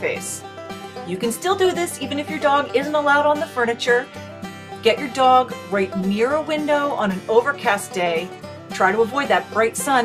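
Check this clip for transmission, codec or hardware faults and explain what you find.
Nothing in the clip points to a fault anywhere along the chain. The sound holds steady throughout, with nothing to report at any point.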